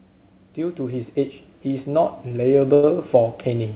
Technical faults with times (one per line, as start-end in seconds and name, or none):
0.56-3.75 automatic gain rising
2.28-2.31 short stall from a late packet
2.74-2.84 short stall from a late packet